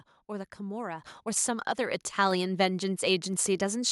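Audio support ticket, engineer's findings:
Microphone volume stepped up at 1.02 s: speech and background noise jump together by about 7 dB in one step. Input-gain control on the capture device raised the level because the microphone read as too quiet. Waveform shows a sudden envelope step. Spectrogram brightens uniformly across all bands, noise floor included.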